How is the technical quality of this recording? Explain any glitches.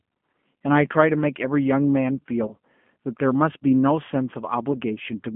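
The technical quality is limited by a low-rate telephone codec throughout, plus two short dropouts from lost packets.

From start to finish the speech carries the sound of the G.729 codec. The band runs only from about 150 Hz to 3.4 kHz, which fits an 8 kbit/s G.729A voice coder. That coder rebuilds each short frame from a vocal-tract filter, a pitch predictor and a few sparse pulses, so the speech is intelligible but rough and slightly synthetic. On a spectrogram, energy stops sharply at 3.4 kHz, with almost nothing below 150 Hz, and the harmonics look smeared.

The two glitches are VoIP packet loss concealed by the speech codec. The first runs from 2.47 to 2.54 s and the second falls at about 4.72 s. The missing audio points to about 20 ms lost at the first point and 10 ms at the second. The decoder filled each gap by extending its last pitch and filter settings while lowering the gain, so the voice turns briefly into a fading buzz or coloured noise and sounds thin, then recovers over the next few frames. 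On a waveform this shows as a short stretch of repetitive, decaying cycles. On a spectrogram it appears as frozen horizontal harmonics that fade.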